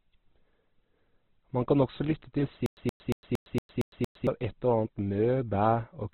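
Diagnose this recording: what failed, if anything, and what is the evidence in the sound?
The whole recording is band-limited, with nothing above about 4.2 kHz, and the speech sounds rough, grainy and noisy rather than swirling or hollow. The likely cause is heavy Opus compression at the codec stage, in its CELT music mode at a very low rate, consistent with roughly 12 kbps. Starved of bits, the encoder keeps each band's energy but fills the detail by folding or noise, and narrows the bandwidth. Missing bands would instead give MP3's watery swirl.

From 2.66 s to 4.27 s the same 122 ms burst of sound repeats seven times, each followed by about 108 ms of digital silence, an even cycle of roughly 230 ms. This is stutter with silent gaps, likely from a playback or stream stall: each retry replays the last buffered fragment, then the buffer runs dry. The regular period, identical content and silent gaps distinguish it from random packet loss, and the audio that should have filled that span is gone.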